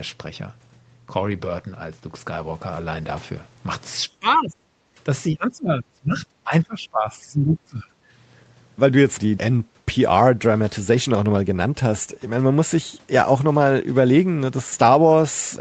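From 4.07 to 4.58 s the speech drops by roughly 20 dB, over about 0.4 s in all. This is speech suppressed in double talk. Both ends were likely talking at once, and the echo canceller could not tell this talker from its own loudspeaker echo. So it pulled the level down on both.

From 4.86 to 5.0 s the room sound dips by about 14 dB for a brief moment. This is background gated by the echo canceller. While the far end played through the loudspeaker, the canceller clamped the microphone hard. It then let go, and the background came back.

From 5.3 to 6.26 s the double-talk suppression returns and is deeper, roughly 25 dB. The speech is pulled down over about 0.7 s of that stretch. From 6.44 to 7.98 s it happens again, at roughly 20 dB and for about 1.5 s. The speech sounds sunk.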